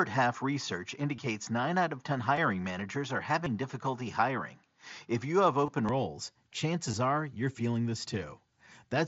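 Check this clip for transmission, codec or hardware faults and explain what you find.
Two faults are present: an input-device change and several concealed Bluetooth packet losses.

From 0.0 to 5.89 s the input switched to a poorer device, likely a different microphone. Nothing passes above 6.9 kHz, with added noise about 45 dB down. It clears abruptly, without a gap or level change.

Concealed Bluetooth headset packet loss occurs at 1.16–1.18, 2.36, 3.45, 5.66–5.68 and 6.92 s. Lost headset packets were replaced by repeating recent waveform, giving brief buzzy smears over the mSBC link.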